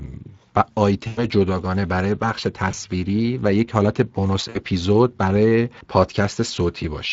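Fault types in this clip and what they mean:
Speex codec: a CELP speech coder whose scarce excitation bits leave the speech plainly hoarse and grainy throughout, which fits a bitrate near 20 kbps. On a spectrogram, harmonics look smeared and noisy rather than crisp, and the waveform carries a constant rough texture.
VoIP packet loss concealed by the speech codec: the decoder covered lost packets by extrapolating its last pitch and filter, producing fading stretches at 1.07–1.26 s, 2.71–2.75 s and 4.49–4.58 s. Spectrograms show frozen, flat harmonics, and the waveform envelope decays smoothly.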